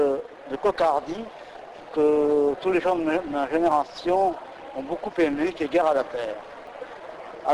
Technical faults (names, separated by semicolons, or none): clock drift buffer slips